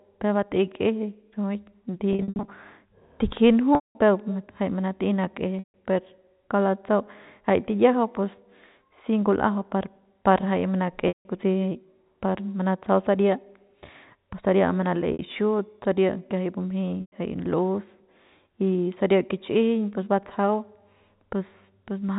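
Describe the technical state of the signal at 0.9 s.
At 0.9 s the speech is intact, with no fault present, and the G.711 telephone coding it passes through shows only its expected cap on content above 4 kHz.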